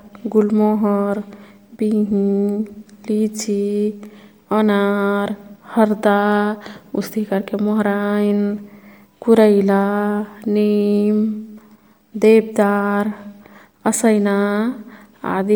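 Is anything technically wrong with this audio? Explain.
Yes, there's plainly audible codec damage running through the whole speech clip, and it's most likely Bluetooth LC3 compression, the LE Audio codec. LC3 chops the signal into short frames, 10 ms here by the sound of it, and spends a limited bit budget across each frame's spectrum. The texture points to a rate around 48 kbps. What you hear is that breathy, grainy edge on the voice, while the band still reaches up to about 20.2 kHz.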